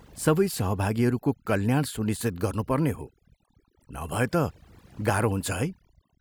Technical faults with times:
0.00-6.21 overdone noise removal

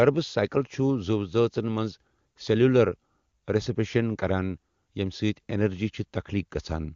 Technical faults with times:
none

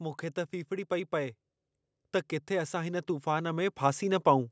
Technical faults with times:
2.47-4.47 automatic gain rising

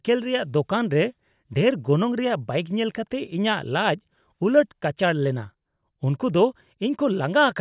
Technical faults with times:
none

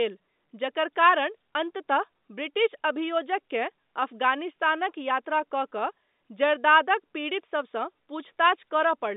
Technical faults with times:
none

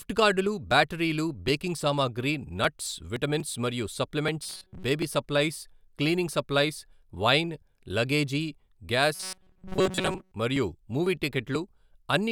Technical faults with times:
4.43-4.83 robotic sound from repeated short buffers
9.15-10.31 robotic sound from repeated short buffers

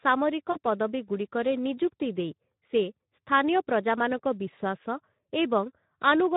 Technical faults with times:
0.00-6.36 Speex codec
0.52-0.58 VoIP packet loss concealed by the speech codec

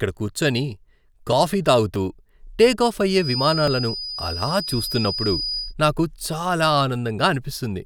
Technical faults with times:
3.16-5.75 feedback whistle

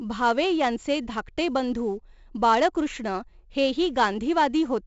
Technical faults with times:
0.00-4.87 4-bit ADPCM compression

